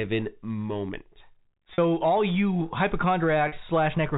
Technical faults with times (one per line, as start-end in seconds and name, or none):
1.74-1.78 packet loss with pitch repetition
3.48-3.52 packet loss with pitch repetition